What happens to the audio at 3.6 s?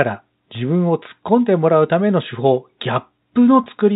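At 3.64 to 3.66 s there is packet loss with pitch repetition: about 20 ms, consistent with one packet, is missing, and the receiver refills it by looping the last pitch cycle. This gives a brief buzzy hold, which appears as identical repeating waveform periods and flat harmonic stripes on a spectrogram.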